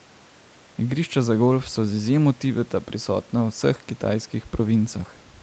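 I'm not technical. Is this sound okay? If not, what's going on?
Yes, nothing stood out as a problem when listening to this recording.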